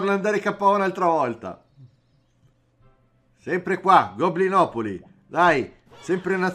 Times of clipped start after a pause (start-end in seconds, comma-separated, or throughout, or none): none